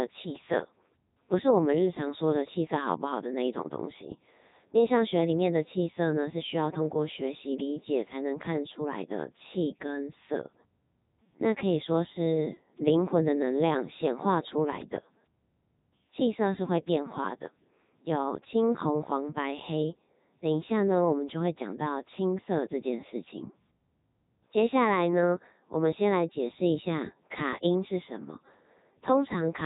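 Speech clip carrying Codec 2 vocoder damage from start to finish, and it is heavy. Nothing survives above about 3.8 kHz, and the voice comes out robotic and buzzy because the decoder rebuilds it from sine waves driven by pitch, voicing, energy and a spectral envelope, discarding the original waveform. That level of damage fits the 3.2 kbit/s mode. Unlike low-bitrate transform codecs, which swirl or smear, this is a steady synthetic buzz.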